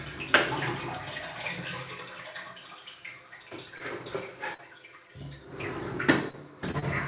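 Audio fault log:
3.78 s, 6.71 s and 6.80 s, short stall from a late packet: a packet arrived late and the jitter buffer ran dry, so the last sound was stretched for about 20 to 27 ms before resuming from the same place. On a spectrogram this shows as a briefly smeared, held band. Nothing is lost, and the playout delay grows by that much each time.
4.54 to 4.60 s, burst of packet loss: consecutive packets were lost, so the receiver extended the last sound for about 46 ms while turning it down, then jumped ahead, leaving about 40 ms missing. The waveform shows a decaying, repetitive stretch followed by an abrupt change where the audio resumes.
6.31 s, short concealed packet loss: about 20 ms never reached the decoder and was replaced by roughly 24 ms of extrapolated sound that blends back into the real signal. It is heard as a brief smear or wobble. On the spectrogram it appears as a slightly blurred, uniform sliver with the detail briefly lost.
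Throughout, G.711 mu-law call path at 64 kbps: the spectrogram shows no content above 4 kHz, which fits narrowband telephone sampling, together with the codec's usual coding noise.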